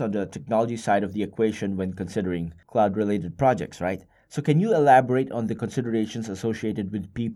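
Speech recording with no audible technical faults anywhere in the clip.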